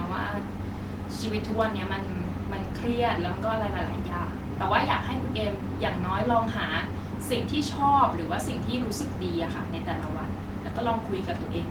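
A short recording of speech, with no technical fault anywhere in it. There is nothing to place at a time or trace to a cause.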